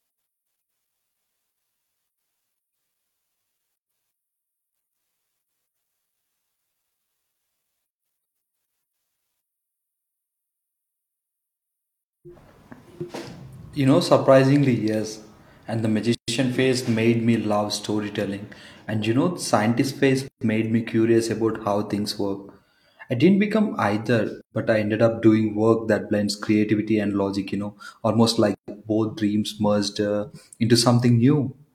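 Short silences of about 130 ms cut into the speech at 3.76, 7.88, 12.01, 16.15, 20.28, 24.41 and 28.55 s. They come every 4 s. Each is a gap at a join of encoded pieces: untrimmed encoder delay and end padding leave a hole with smeared edges before the speech resumes.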